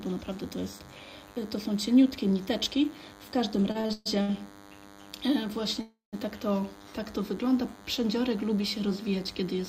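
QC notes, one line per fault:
Throughout: DECT cordless phone buzz. A DECT handset or base station close to the recording chain is sending a radio burst every 10 ms, and the audio circuitry is rectifying it into the signal. The result is a thin, steady buzz at 100 Hz carrying a dense stack of harmonics, sitting roughly 25 dB below the wanted sound. Because the bursts are regular, the buzz never varies in pitch or level.
3.71–4.40 s: repeated stalls (stutter). Packets reached the receiver late or slower than playback consumed them, so the jitter buffer emptied five times in quick succession. Each time the receiver stretched the last sound to cover the gap, and the longest hold, 126 ms, fades. In all, 287 ms was filled in, about half of this span, so the sound lurches and drags while nothing is actually lost.
5.81–6.15 s: call audio freeze. Packets were most likely held up in transit, leaving the jitter buffer empty for 317 ms. 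The receiver first extended the last sound, which faded, then dropped into about 150 ms of silence before the delayed audio resumed exactly where it had stopped. Nothing is missing, but a pause has been inserted, and everything after it runs about a third of a second later than before.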